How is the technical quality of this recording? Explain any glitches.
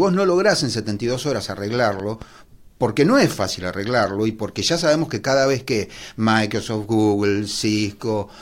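The recording has one clear glitch, a loud pop made of two quick pops between about 2.00 and 2.25 s, just before "porque no es fácil". The speech continues beneath them. They peak a few decibels above the speech. The likely cause is a sudden voltage step or pulse, such as a plug, switch or static discharge, which the following circuitry shaped into short thumps. On a waveform they show as two sharp spikes standing above the speech envelope. On a spectrogram they appear as two thin vertical stripes spanning the whole frequency range.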